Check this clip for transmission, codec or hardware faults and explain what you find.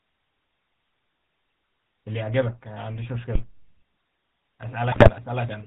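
Three faults are present in this speech. One runs the whole way through. Two are brief events near the end.

GSM full-rate codec damage covers the entire clip and is plainly audible. The codec models the vocal tract as a filter and excites it with a coarse pulse train. Only a third of the excitation samples survive. Nothing above 4 kHz gets through. The voice sounds buzzy and gravelly, with a muffled top end. The character points to the 13 kbps full-rate mode.

A phantom power thump lands between 3.35 and 3.45 s. A supply was switched on a live input. The voltage step passed through the coupling capacitors as a single low-frequency pulse. It is heard as a deep, short knock. It dies away in about 21 ms, so it reads as a thud rather than a boom.

GSM bit errors appear from 4.92 to 5.10 s. Corrupted bits reached the speech decoder over a weak link. Damaged filter, pitch and gain values bent the spectrum and jolted the level frame by frame. 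The span breaks into squawks, pops and a gargling texture. Its length fits a run of several consecutive damaged frames. It then clears before the clip ends.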